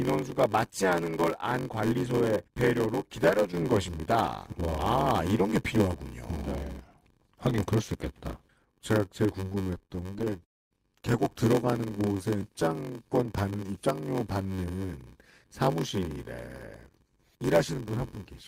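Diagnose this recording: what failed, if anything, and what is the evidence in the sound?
Block size mismatch (padded), throughout: a buzz near 93.8 Hz and speech running at 0.861 speed, which fits zero-padded 512-sample driver buffers.

Repeated stalls (stutter), 9.49–10.43 s: the network repeatedly starved the jitter buffer. Brief gaps of up to 24 ms are filled by continuing the sound, adding 294 ms of drag.

Call audio freeze, 10.45–10.73 s: the sound stops, with about 250 ms of silence, then resumes where it left off, likely from packets held up in the network.

Jitter buffer slow-down, 12.05–12.91 s: speech runs at 92% speed at the same pitch. Repeated pitch periods add 81 ms to rebuild the buffer.

Jitter buffer speed-up, 17.04–17.97 s: speech runs at 104% speed at the same pitch. Short pitch-period cuts remove about 40 ms of excess delay.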